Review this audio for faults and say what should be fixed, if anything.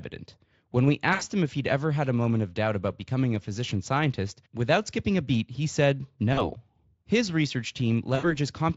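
VoIP packet loss concealed by the speech codec occurs at 1.13 to 1.25 s, 6.33 to 6.53 s and 8.15 to 8.37 s. The decoder stretches its last pitch and filter into a fading buzz, which fits gaps of about 80, 40 and 80 ms, and the sound stays weak briefly afterwards as each frame builds on the last. The Speex coding itself shows little damage. A jitter buffer with forward error correction or redundant packets would prevent these dropouts.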